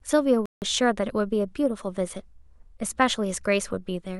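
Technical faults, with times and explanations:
0.46–0.62 s, Bluetooth stall: the speech drops to complete silence for about 0.16 s and then carries on, most likely because radio interference delayed packets long enough for the headphones' buffer to empty, halting playback until the retransmitted audio arrived. The gap is plain silence with no crackle, smearing or repeated fragments, which separates it from a codec dropout covered by concealment, and its length is far beyond a single-sample click.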